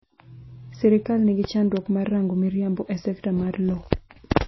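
Throughout, the speech sounds watery and dull, with nothing above 5.8 kHz, plainly audible MP3 compression damage, likely from a low bitrate around 24 kbps. From 1.44 to 1.47 s, a sharp loud pop, about 10 dB above the speech, jumps out, likely a brief electrical voltage spike added to the signal.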